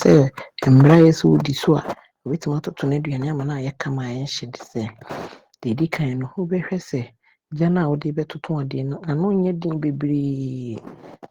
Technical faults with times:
0.71-1.08 microphone overload
1.95 microphone volume stepped down

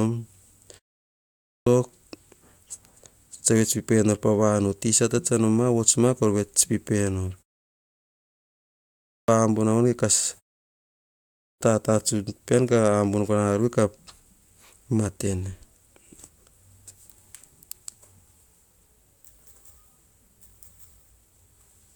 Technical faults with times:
1.11-1.66 clipped start after a pause
8.75-9.28 clipped start after a pause
11.11-11.61 clipped start after a pause

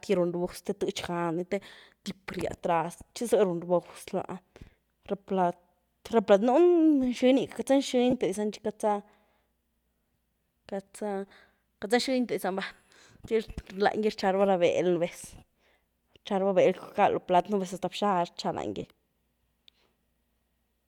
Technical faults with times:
8.11-8.13 lost LE Audio frames
11.28-11.31 lost LE Audio frames
18.82 lost LE Audio frames

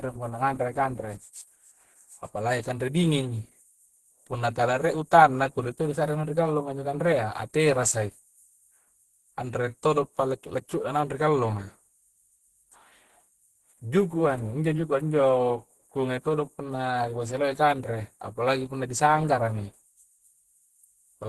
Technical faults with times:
0.00-21.28 Opus compression

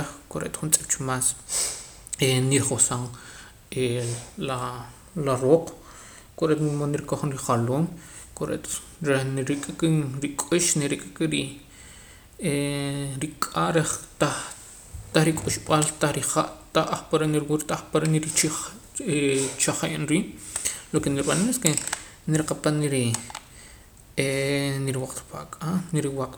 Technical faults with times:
none

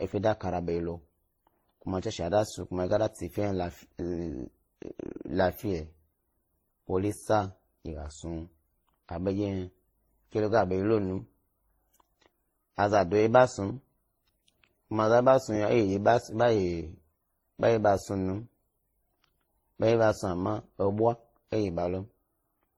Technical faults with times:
0.00-22.78 transcoding between lossy codecs

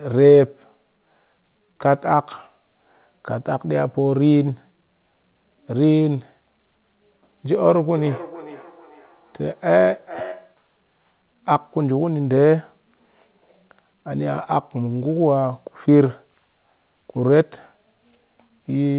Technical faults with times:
7.67-10.65 feedback echo between two devices

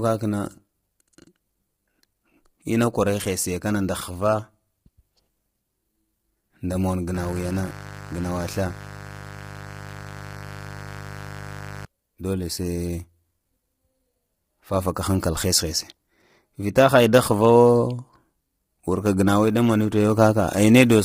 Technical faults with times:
0.00-21.05 low-delay AAC compression
7.14-11.85 mains buzz

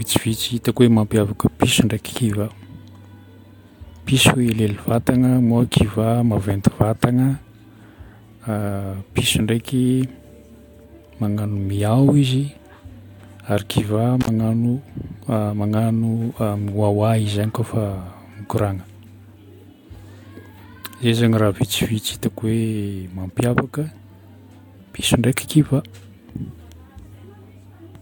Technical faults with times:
14.21-14.28 intermittent contact

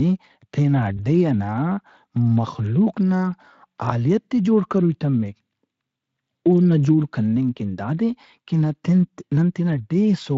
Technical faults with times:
0.97-1.05 VoIP packet loss concealed by the speech codec

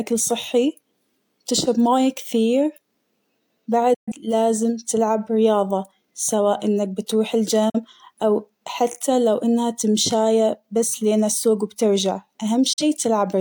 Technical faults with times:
3.94-4.12 digital broadcast dropout
7.69-7.80 digital broadcast dropout
12.73-12.83 digital broadcast dropout

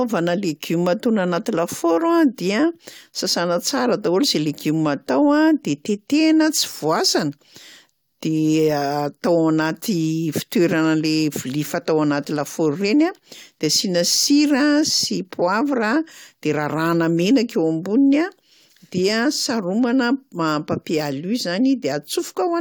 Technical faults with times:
none

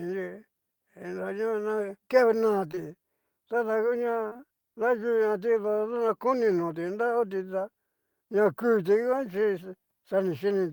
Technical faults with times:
2.71-2.79 short concealed packet loss
4.29-4.41 short concealed packet loss

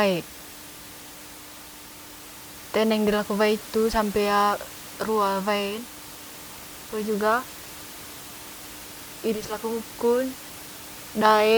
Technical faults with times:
none

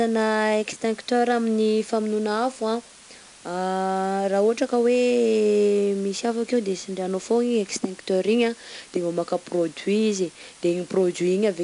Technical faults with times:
0.00-11.64 low bit depth with dither
0.00-11.64 4-bit ADPCM compression

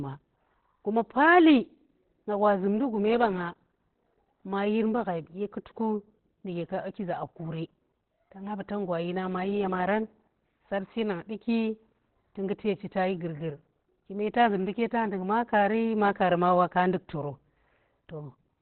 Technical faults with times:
0.00-18.62 Opus compression

